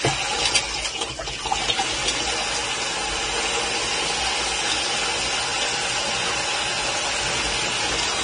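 Heavy codec damage runs through the whole clip. Nothing survives above 9.7 kHz. The upper band sounds hissy and grainy, and attacks are smeared. This is likely Vorbis compression at a low setting, around 24 kbps, where fine treble detail collapses into noise.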